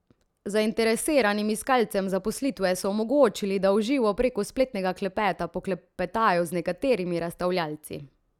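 No technical faults can be heard anywhere in the recording.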